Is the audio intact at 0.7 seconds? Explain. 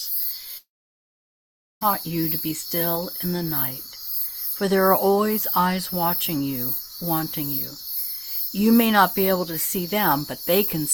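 No. A long network dropout spans 0.57 to 1.83 s, likely from audio never arriving; a brief fading buzz gives way to about 1.2 s of silence, far longer than a short packet glitch.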